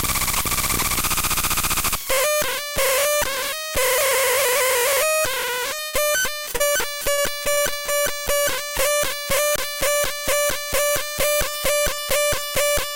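At 5.87–5.95 s, a burst of packet loss drops about 60 ms of audio. The receiver stretches the last sound into a fading hiss or buzz. On the spectrogram it shows as a smeared, dimming band, and the audio resumes further on.

Short concealed packet loss follows at 6.45–6.49 s, 6.53–6.56 s and 6.56–6.62 s, about 20, 20 and 40 ms lost. Each gap is patched and blended back, giving brief smears or wobbles. The waveform shows small repeated or softened patches.

From 7.12 to 7.90 s, repeated packet loss (robotic sound) leaves several gaps, the longest 56 ms, with about a fifth of the stretch patched. The result is choppy, with pieces missing, with striped, repetitive spectrogram texture.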